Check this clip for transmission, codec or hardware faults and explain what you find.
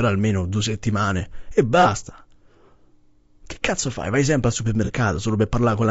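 Two faults are audible in this speech clip: coarse low-delay coding throughout, and two brief concealed dropouts.

Low-delay AAC compression, throughout: the speech sounds rough and grainy, with noise between the pitch harmonics and a thin, synthetic top band. This is likely AAC-ELD, whose short frames resolve harmonics poorly, and the damage fits a bitrate around 32 kbps.

AAC frame loss with concealment, at 1.82–1.87 s after "almeno due settimane e" and at 4.85–4.90 s after "sempre al": each is a short smeared, noisy patch. About 30 ms of audio is missing each time, consistent with a single lost frame, and the decoder filled it in from the previous spectrum.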